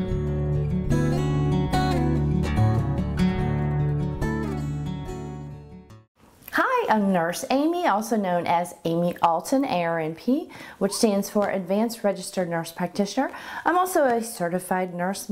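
No technical faults are audible.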